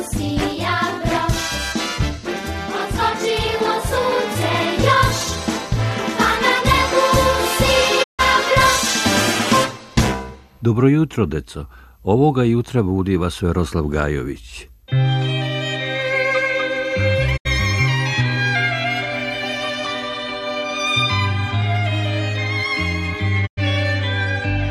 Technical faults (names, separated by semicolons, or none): digital broadcast dropout